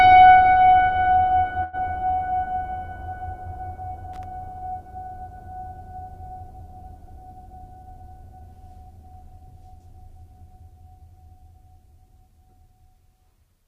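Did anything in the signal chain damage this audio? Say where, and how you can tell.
Yes. Around 1.63 to 1.76 s the music holds on one sound for about 98 ms before resuming from exactly where it stopped: a short stall from a late packet at the network and jitter buffer stage. Nothing is skipped, which separates it from packet loss concealment that drops material.

From 4.13 to 4.24 s there is an irregular burst of crackle, loose connector crackle in the analogue wiring. A contact making and breaking chops the signal at random, unlike a digital dropout, which would show a clean gap.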